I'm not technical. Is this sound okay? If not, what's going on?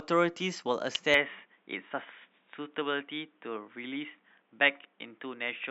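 No, there are two problems. At 0.95 s there's a sharp snap laid over the speech. That's an electrical switching spike, most likely a nearby switch, motor or static discharge sparking briefly and the audio line picking it up.

From 1.14 s to the end, the speech suddenly sounds duller and boxier, with nothing above about 3.8 kHz and faint new background noise. There's no gap and no jump in loudness. This is likely an input switched to a poorer device, such as another microphone or a headset.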